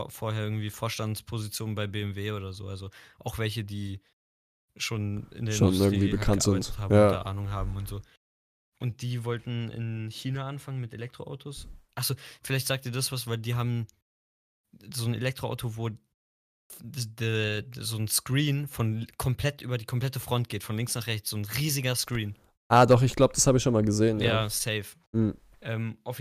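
Nothing in this speech recording stands out as a technical fault; there's nothing here to flag.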